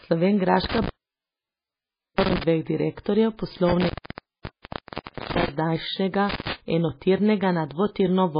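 From start to finish the speech carries heavy watery, swirling artefacts, likely from MP3 compression at a very low bitrate, around 19 kbps. With so few bits, the encoder drops weaker frequency components, and they flicker in and out between frames, smearing consonant onsets and leaving s sounds chirpy. Nothing is heard above 5 kHz. A plain low-pass filter would dull the treble the same way but leave no swirling.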